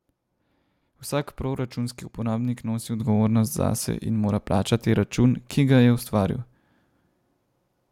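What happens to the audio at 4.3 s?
Nothing goes wrong at 4.3 s; the speech carries on intact through that moment, with no dropout, click or distortion.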